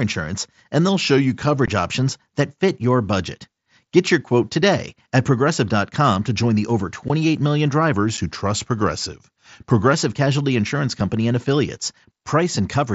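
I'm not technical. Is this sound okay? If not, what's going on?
No. The speech has two kinds of fault.

From 0.89 to 1.56 s, just before "options that fit your", and again from 7.93 to 9.93 s, the speech slows by about 6% and drops about a semitone, then snaps back. That is a drift correction step, likely from software matching two clocks.

The speech also has unconcealed Bluetooth headset packet loss: tiny holes of a few milliseconds, with abrupt edges, at 1.66 s, at 7.08 s right after "to join the over", and at 8.17 s. The headset link dropped those bits of sound, and nothing filled the gaps. The headset's mSBC codec adds a faint grain.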